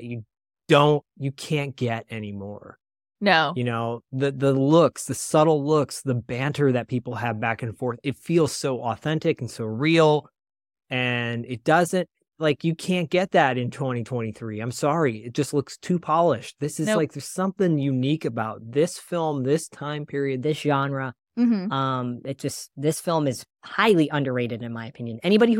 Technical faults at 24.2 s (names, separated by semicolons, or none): section at the wrong speed